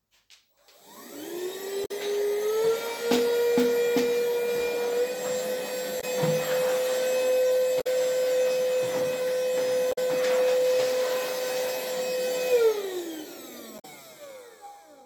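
Damaged data in a compressed stream at 1.82, 5.97, 7.77, 9.89 and 13.76 s: corrupted frames make the decoder lose sync, each giving a short glitch in the sound of about 0.07 to 0.1 s.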